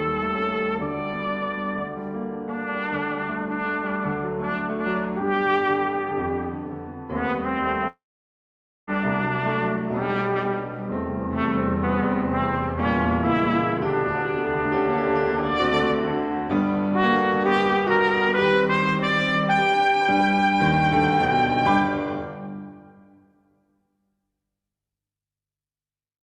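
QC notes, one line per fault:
7.87–8.90 s long network dropout: the sound smears into a brief fading buzz, then about 0.88 s of silence, and resumes a full second further on, likely because incoming audio stopped and the receiver stretched the last sound before giving up, unlike a short packet glitch.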